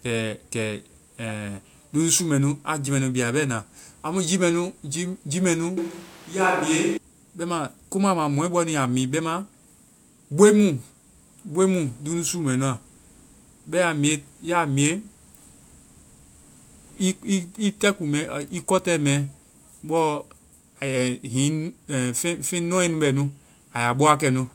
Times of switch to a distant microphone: 5.78-6.97

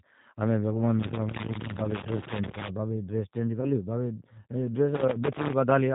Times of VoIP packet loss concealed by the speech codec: 3.61-3.67

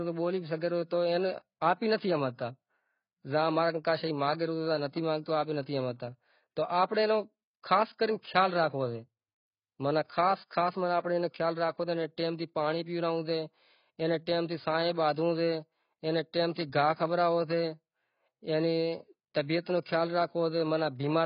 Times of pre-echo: 8.22-8.24

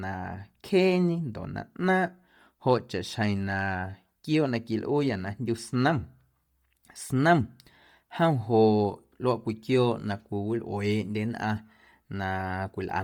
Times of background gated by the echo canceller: none

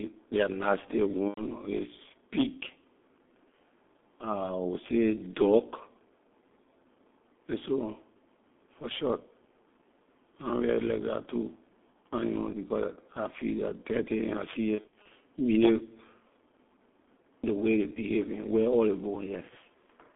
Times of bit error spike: none

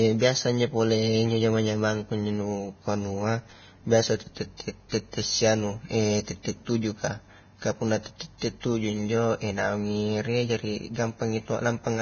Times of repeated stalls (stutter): none

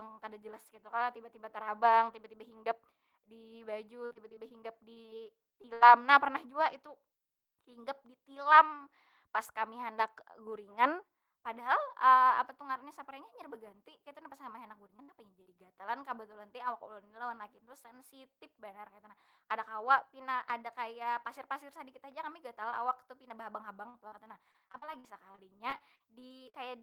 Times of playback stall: none

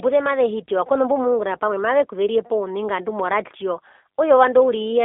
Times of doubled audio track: none

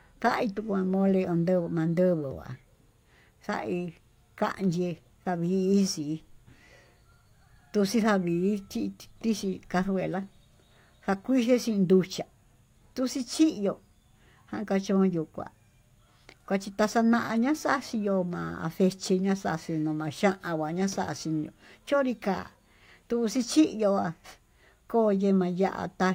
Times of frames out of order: none

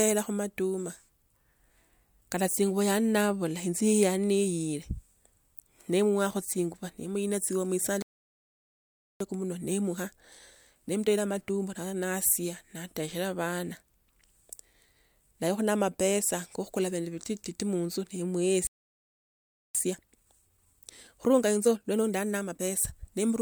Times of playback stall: 8.02-9.20, 18.67-19.75

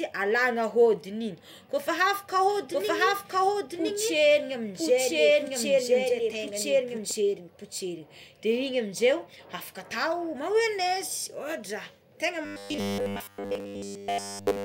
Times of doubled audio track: 2.49-7.11

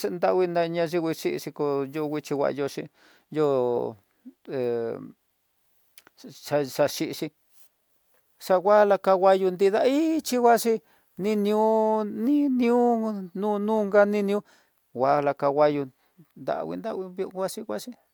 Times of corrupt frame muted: none

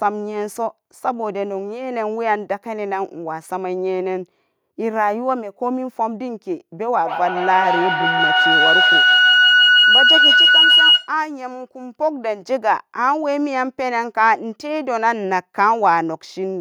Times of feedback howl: 7.04-11.21

